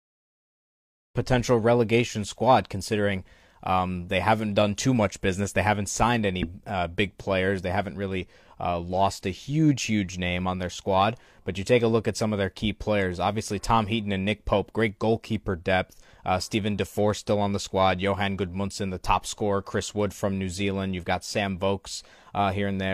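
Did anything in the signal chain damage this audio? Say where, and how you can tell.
No, nothing in the signal chain damaged this speech recording. The level rises in a smooth fade from around 1 s to full level at 1.18 s, with no click or hard edge, as an editor would apply it.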